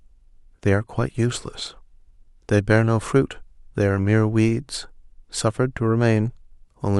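No technical faults can be heard anywhere in the speech recording. There is nothing in it to mark with a time or describe further.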